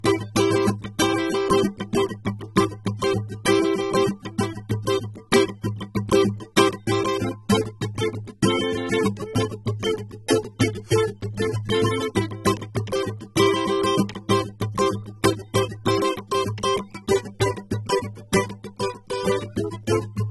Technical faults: low-bitrate audio saved at a high bitrate

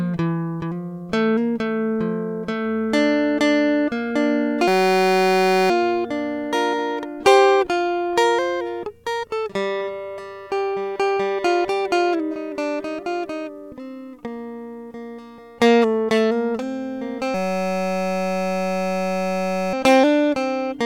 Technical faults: system hang loop

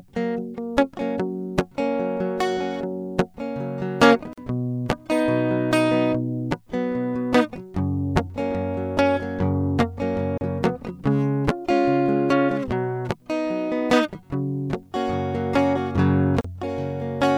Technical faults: gap at a join of encoded pieces

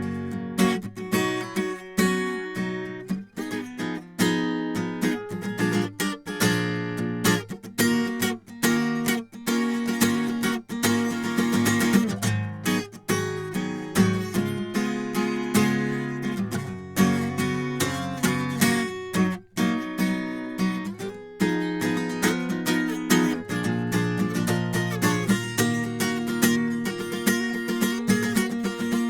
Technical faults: none

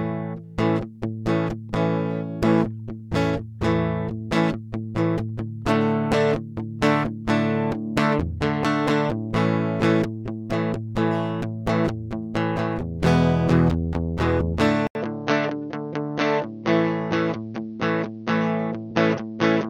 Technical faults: damaged data in a compressed stream; input switched to a poorer device

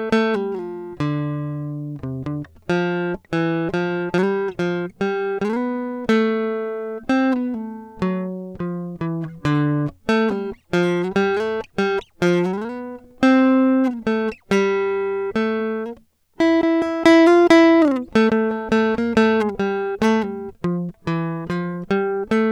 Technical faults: none

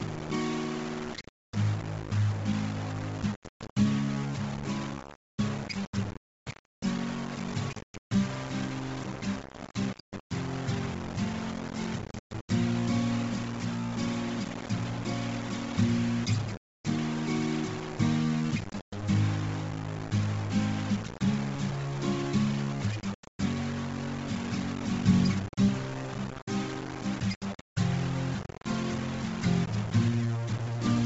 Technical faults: low bit depth without dither; Bluetooth LC3 compression

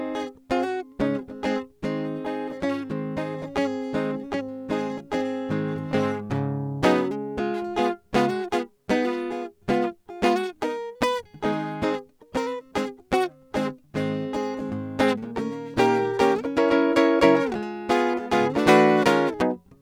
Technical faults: none

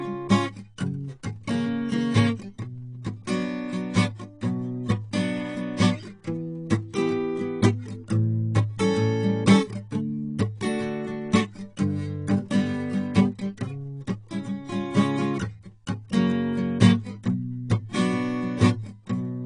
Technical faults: AAC compression

